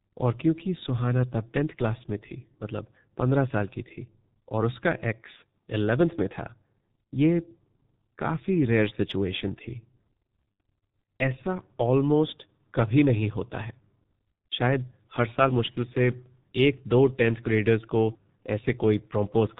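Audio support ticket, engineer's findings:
G.723.1 codec, whole clip. Speech muffled and hoarse, nothing audible above 4 kHz, consonants smeared. Heavy damage, consistent with G.723.1 at 6.3 kbit/s: 30 ms frames and a slowly updated vocal model lose high band and fine detail.

VoIP packet loss concealed by the speech codec, 5.36–5.41 s and 10.55–10.57 s. Brief buzzy or noisy stretched fade, then weak, distorted speech. Fits one lost frame (30 ms), then two (60 ms). Decoder extrapolates last pitch and filter with falling gain; recovery lags.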